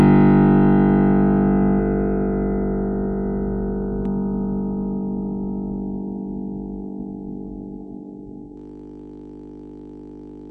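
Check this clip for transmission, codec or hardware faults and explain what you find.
Three problems show up in this music clip, one running the whole way through and two at specific points.

AAC compression damage is audible from start to finish. The top end is dull and sustained parts have a smeared, warbly, fizzy texture. That's likely AAC-LC at a low bitrate, something like 32 kbps, where the encoder drops the high-frequency cut-off and leaves holes in the spectrum.

From 1.79 s to 4.05 s there's a doubled audio track. A second full-band copy trails about a tenth of a second behind, roughly 5 dB quieter, with no room colour. It starts and stops abruptly, which likely points to the audio being captured twice through a slower path.

From 8.57 s to the end there's a system hang loop. A 20 ms slice of audio repeats exactly, around a hundred times, turning into a steady 50 Hz buzz. The machine or driver froze while the sound hardware kept replaying the same ring buffer.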